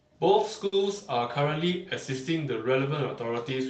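Speech heard through a call codec with its top end stopping near 8 kHz has a short stall from a late packet at 0.66 to 0.73 s. A packet arrived late, the jitter buffer ran dry, and the receiver stretched the preceding sound for about 60 ms, giving a held moment with a slight buzz or dip. Unlike a packet-loss dropout, nothing is skipped. The audio resumes exactly where it paused, so everything after it is simply shifted about 60 ms later.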